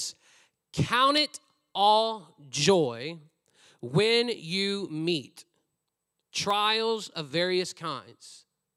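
Three short clicks punctuate this speech, at 1.18 s, 2.20 s and 6.51 s, the last one right before "of various". Each is a single sharp tick with nothing missing to the ear. That points to dropped samples: most likely a fraction of a millisecond of the stream went missing, so the waveform leaps straight to a later value. That step is what produces the click and the thin vertical line you'd see in a spectrogram.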